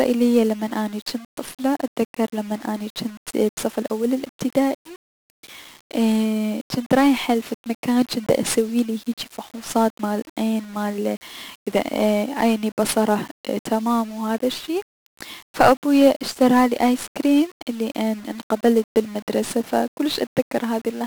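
1-bit DFPWM compression runs through the whole of this speech recording. Each sample carries a single bit nudging an adaptive level up or down, so heavy broadband quantisation noise makes everything fuzzy and crackly, buries the treble in hiss, and fits a bitrate around 48 kbps.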